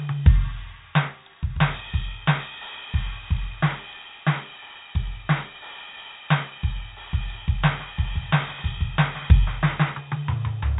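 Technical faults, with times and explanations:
Throughout: 4-bit ADPCM compression. Each sample is coded as a coarse step from a predicted value, leaving heavy gritty hiss that rises with the music's level and smears sharp attacks. Nothing is heard above 3.8 kHz, which fits a 32 kbps stream.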